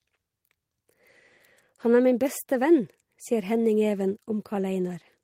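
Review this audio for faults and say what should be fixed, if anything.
Nothing needs fixing, since no technical faults can be heard anywhere in this speech recording.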